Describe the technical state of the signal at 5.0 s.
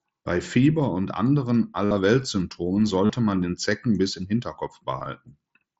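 Between 5.00 and 5.06 s the speech takes on a buzzy, tonal texture, with a small warble as the real signal resumes. This is concealed Bluetooth headset packet loss. A few brief dropouts, about 22.5 ms in total and none longer than 15 ms, hit the wideband mSBC link between headset and phone. Each time, the receiver filled the gap by repeating the closest-matching piece of the preceding waveform, which produces that held, buzzy quality.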